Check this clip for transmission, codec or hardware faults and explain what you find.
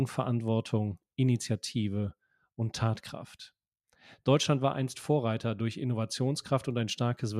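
Nothing here points to a transmission, codec or hardware problem; the audio just runs along steadily without anything catching the ear.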